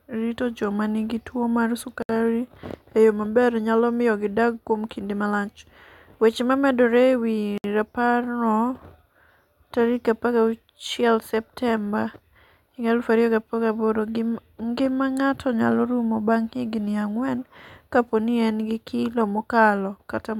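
A speech clip with two brief dropouts, after "joma nigi tuwo mar" at 2.02 s (about 68 ms) and at 7.58 s (about 64 ms): gaps at joins of encoded pieces, where untrimmed encoder delay and end padding leave silences with smeared edges.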